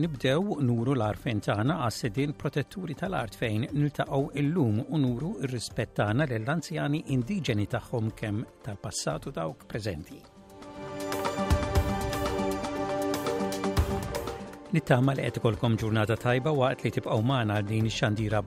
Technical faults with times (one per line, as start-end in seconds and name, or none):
none